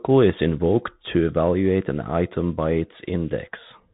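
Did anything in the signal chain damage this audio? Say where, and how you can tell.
Yes. The damage sits at the codec stage: a Bluetooth CVSD headset codec runs through the whole clip. The speech stops dead at about 3.8 kHz, s sounds turn scratchy, loud high peaks distort, and a granular hiss lies under everything. This fits one-bit, 64 kbps delta modulation whose adaptive step can't keep pace.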